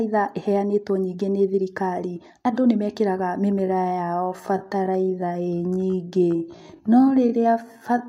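From 3.60 s, right after "andũ nĩmekĩrega", the speech suddenly drags to about 0.62 times its earlier pace and stays that way to the end, while the pitch doesn't drop at all. This is a time-stretched section, likely caused by software lengthening that part of the audio to fill a set duration, padding it out by repeating short slices so the pitch is held constant.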